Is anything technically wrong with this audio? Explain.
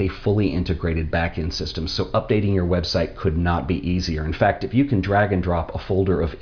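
No, nothing is technically wrong with this audio.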